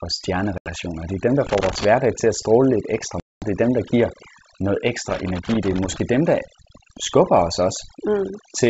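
The whole clip of speech has overdone noise removal: the background drops and breaks up into twinkling specks, and quiet parts of the voice got suppressed along with the noise.

At 0.58 to 0.72 s there's packet loss on an ADPCM call. About 80 ms of audio, a handful of packets, drops into a hard-edged hole. The decoder's predictor then restarts out of step, so the speech comes back slightly distorted before settling.

From 1.47 to 1.85 s, between "er dem der" and "til at stråle lidt", there's loose connector crackle, an irregular scratchy burst from a contact making and breaking.

Right after "at stråle lidt ekstra", at 3.20 to 3.44 s, a longer ADPCM packet-loss gap hits. About 220 ms, roughly ten packets, is gone, with the same distorted recovery.

The crackle returns from 5.10 to 6.00 s, after "dem der giver noget" and before "dem der skubber os".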